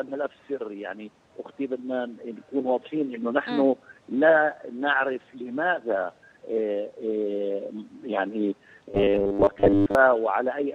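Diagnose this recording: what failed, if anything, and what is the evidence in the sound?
Robotic sound from repeated short buffers, 8.91 to 9.95 s: a rigid 100 Hz buzz, likely from a starved playback buffer looping about 10 ms segments, replacing most real audio.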